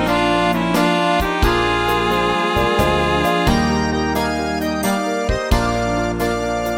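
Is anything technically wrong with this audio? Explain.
No, nothing technically wrong can be heard in this audio.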